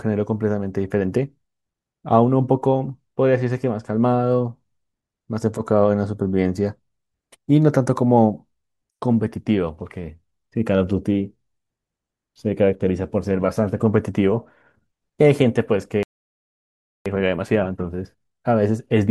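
At 16.03 s the speech cuts out for about 1.03 s, a playback stall, most likely the player running dry or its output thread being blocked, before resuming at 17.06 s. From there until the end, time-compressed catch-up runs the speech about 1.1 times faster at unchanged pitch, with small cross-faded cuts.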